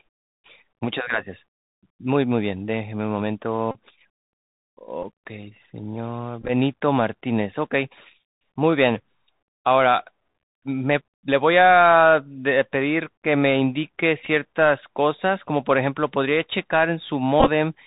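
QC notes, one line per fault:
Throughout: Bluetooth CVSD headset codec. Everything sits at 64 kbps, nothing above 4 kHz, with gritty hiss, scratchy s sounds and loud bright bits distorting as the step size lags.
3.71–3.78 s, 5.03–5.05 s, 6.41–6.51 s, 14.24–14.28 s, 17.40–17.50 s: Bluetooth headset packet repeated. Lost stretches from 7.5 to 48.8 ms get refilled with the previous packet, giving a short buzz near 267 Hz from the 3.75 ms repeat.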